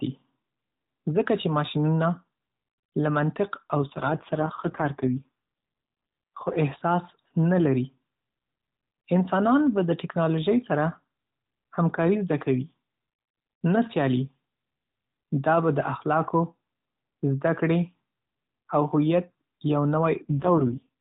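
From 3.82 to 6.59 s, and again from 20.29 to 20.89 s, the speech turns buzzy and synthetic with no gap and no change in bandwidth. That's an AMR rate drop, which fits the codec stepping down from 12.2 to 4.75 kbps before recovering.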